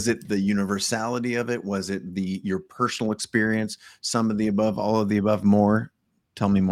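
Clock drift between sender and receiver runs through the whole speech clip. The sender's clock is about 1.5% slower than the receiver's, so the jitter buffer keeps draining. A spectrogram shows no steady artefact, only small, irregular seams where the stream has been patched to keep up.

From 0.45 to 6.51 s, repeated timing corrections fill the shortfall by repeating short pieces, which stretches delivery to 98% speed and adds roughly a tenth of a second overall. Each correction is small, heard if at all as a faint hiccup or wobble in tempo. In the waveform, brief duplicated cycles appear. In the spectrogram they show as thin vertical discontinuities at uneven intervals.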